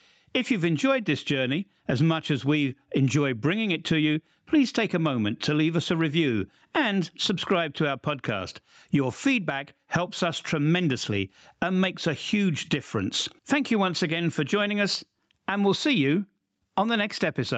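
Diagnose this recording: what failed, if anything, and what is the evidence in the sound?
Gain pumping runs throughout: quiet passages and background between loud sounds swell, then duck under each loud sound, with a swing of about 20 dB. The likely cause is microphone gain set far too high at capture, with a fast limiter pulling it down. The waveform envelope looks flattened. A spectrogram shows the background brightening in gaps and darkening under loud sounds. The normal call band-limiting leaves nothing above 8 kHz.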